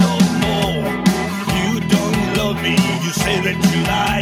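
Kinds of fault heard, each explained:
Channel delay (comb filtering): One channel lags the other by about 5 ms before mono summing. Notches from about 100 Hz make the whole sound hollow and phasey.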